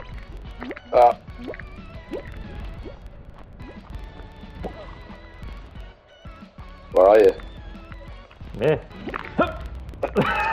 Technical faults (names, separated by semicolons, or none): filter restarted on every block